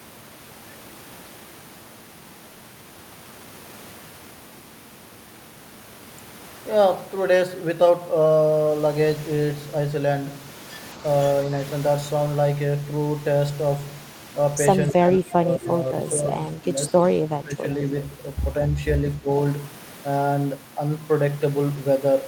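From 14.92 to 15.69 s the speech sinks and breaks up in patches, dropping by around 15 dB at its deepest. It dips again from 16.57 to 16.94 s (around 10 dB), from 17.21 to 17.66 s (the deepest, near 20 dB), and briefly from 19.18 to 19.3 s. This pattern is likely speech suppressed in double talk: with both ends talking at once, the echo canceller could not tell this talker from loudspeaker echo and turned everything down.

Right at the end of the first dip, from 15.66 to 15.71 s, a faint copy of the speech slips through about 215 ms behind the original and roughly 15 dB below it. This is likely an echo leak: the far end's loudspeaker playback reached its microphone, and its canceller failed to remove all of it, so a delayed scrap returned down the line.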